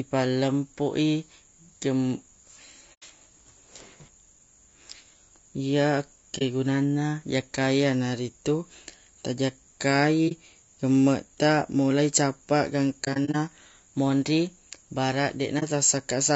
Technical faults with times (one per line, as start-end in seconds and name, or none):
0.00-16.35 low-delay AAC compression
2.94-3.03 AAC frame loss with muting
6.38-6.42 AAC frame loss with muting
10.28-10.32 AAC frame loss with muting
13.04-13.36 AAC frame loss with muting
15.59-15.63 AAC frame loss with muting